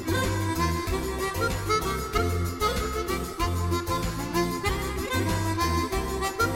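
No technical faults can be heard anywhere in this audio.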